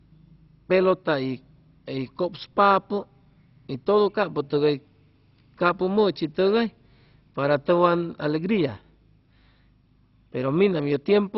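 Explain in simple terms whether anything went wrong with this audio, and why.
Throughout the speech, nothing comes through above about 5.6 kHz, and the sound gurgles grainily. That points to MP2 compression, likely: unlike a plain dull filter, it adds fluttering distortion.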